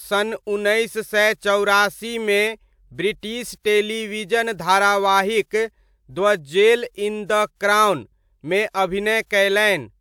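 No technical faults can be heard anywhere in this recording of speech.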